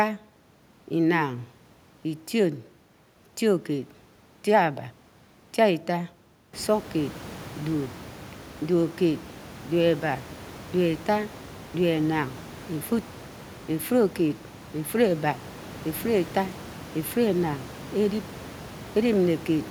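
No technical faults are audible anywhere in this recording.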